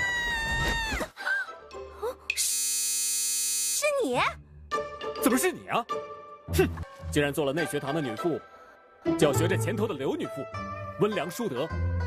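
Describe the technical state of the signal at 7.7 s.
At 7.7 s the signal is intact, with no dropout, distortion or other fault to be heard.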